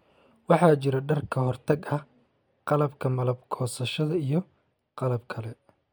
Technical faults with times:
none

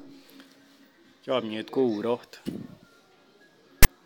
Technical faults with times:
3.83-3.86 file tags played as audio

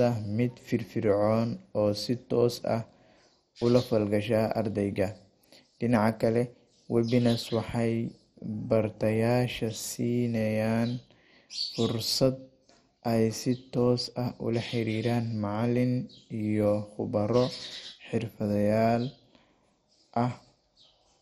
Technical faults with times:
0.00-21.22 MP2 compression

